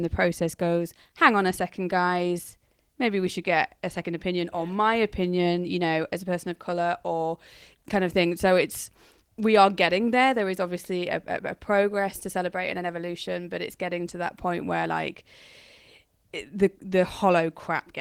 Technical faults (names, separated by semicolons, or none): none